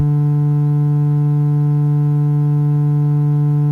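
A short recording of sounds with no technical faults to report, with nothing in its level, continuity or frequency content that calls for comment.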